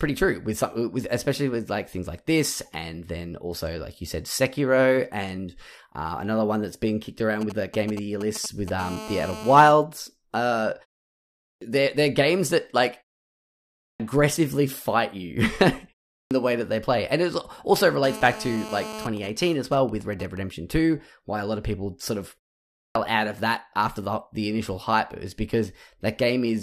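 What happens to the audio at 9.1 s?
A GSM phone buzz runs from 8.79 to 9.72 s. A nearby 2G handset on a call pulses its transmitter 217 times a second, and the audio circuit rectifies those bursts into a steady, raspy 217 Hz buzz at about 12 dB below the speech. Its harmonic-rich, harsh tone and 217 Hz pitch set it apart from smoother 50 or 60 Hz mains hum.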